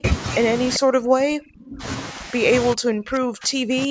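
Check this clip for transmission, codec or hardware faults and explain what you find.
The clip has two call-path faults: a brief echo leak and repeated suppression of the speech while both ends are talking.

Echo leak, 0.74 to 0.79 s: The far end's echo canceller likely let part of its loudspeaker pickup back into the call. A short, delayed copy of the speech, about 390 ms behind, surfaces at roughly 15 dB below the main speech.

Speech suppressed in double talk, 0.78 to 1.85 s, 2.12 to 2.34 s, and 2.74 s to the end: The echo canceller likely could not separate the local talker from echo during overlap and turned everything down. The first and last stretches drop by as much as about 40 dB, nearly cutting out. The middle dip is only a few dB.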